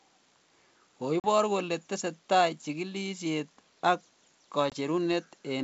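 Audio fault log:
1.20–1.25 s and 4.70–4.74 s, packet loss on an ADPCM call: about 40 ms (a couple of packets) and then about 20 ms (one packet) drop to silence. The decoder's predictor and step size then lag the sender's, so the wideband G.722 sound resumes slightly distorted before settling. On a spectrogram, each gap appears as a sharp vertical blank stripe. On the waveform, it is a flat line followed by a short misshapen burst.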